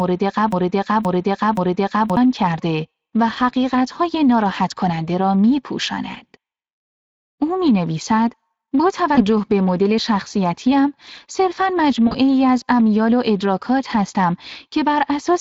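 The whole clip has a noisy, plainly hoarse coarseness on the speech, with the top band sounding thin and hissy rather than detailed. That is Speex codec damage: this CELP coder squeezes the excitation into a small budget, and the result fits a setting of roughly 20 kbps.

From the first instant to 2.17 s, a 0.52 s fragment plays over and over, already repeating when the clip begins and heard three times back to back. This broken-record loop most likely comes from a stalled player or stream resending its last buffered piece, so whatever should have played there is lost.

At 9.15 to 9.21 s, and again at 12.07 to 12.16 s, the speech briefly stretches into a fading sound before recovering unevenly. This is VoIP packet loss concealed by the speech codec, with the decoder extrapolating its last pitch and filter. The gaps point to one and then two 20 ms frames missing.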